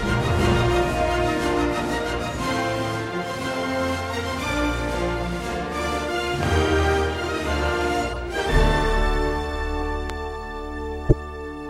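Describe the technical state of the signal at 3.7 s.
Nothing is wrong with the signal at 3.7 s; the audio is intact at that moment.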